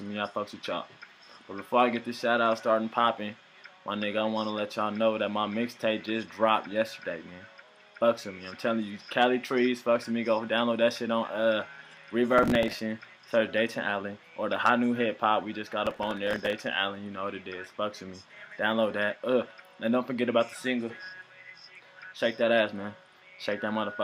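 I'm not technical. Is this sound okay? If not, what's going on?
No. There is processor overload crackle from 12.38 to 12.79 s and from 15.86 to 16.53 s. The computer fell behind and replayed tiny scraps of old audio, causing gritty crackling.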